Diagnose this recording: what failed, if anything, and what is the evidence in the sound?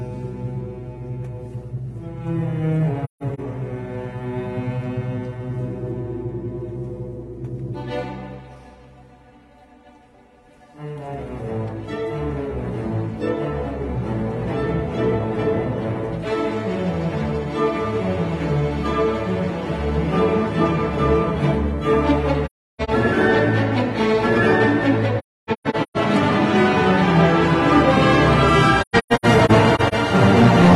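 AAC frame loss with muting in the codec stage. Soft-edged gaps at 3.04–3.40, 22.46–22.90, 25.18–25.97 and 28.81–29.94 s. The decoder zeroed the lost frames, and the overlapping windows faded each gap in and out.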